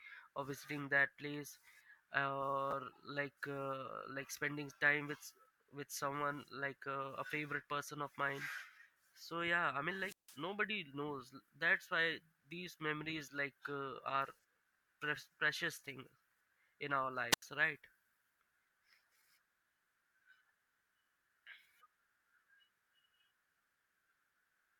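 Right at 2.71 to 2.73 s, just before "like uh like spending", there's a chunks-out-of-order glitch. A 10 ms slice of audio lands one chunk late, swapping places with its neighbour. Nothing's missing, but you get a tiny jumbled stutter at the hard joins.

Then come two wireless microphone squelch dropouts. From 9.94 to 10.44 s the FM signal fades, hiss creeps up, and the receiver's squelch mutes for about 160 ms before the sound returns. The same happens at 17.31 to 17.42 s, right after "in our", with a shorter mute of about 84 ms.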